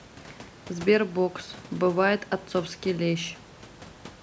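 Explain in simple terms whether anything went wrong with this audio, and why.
Nothing went wrong: the speech has no faults, with the call's microphone processing trimming the lowest bass and topping out around 8 kHz as intended, and the faint room noise staying well beneath the speech as part of the recording.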